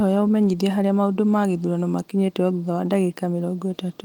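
No technical faults are audible.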